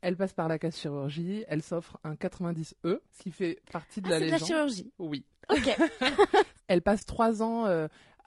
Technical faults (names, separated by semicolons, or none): low-delay AAC compression; AAC frame loss with muting